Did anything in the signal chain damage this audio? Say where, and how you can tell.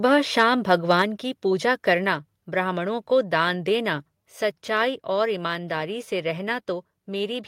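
Yes. Microphone overload at the converter from 0.71 to 1.02 s, just before "की पूजा": flat-topped waveform peaks, about 2 dB over, and a harsh edge, likely from excessive input gain.

Microphone volume stepped down at 1.02 s, a call-processing stage: voice and background both drop by about 4 dB, visible as a sudden envelope step, likely an automatic reaction to the clipping.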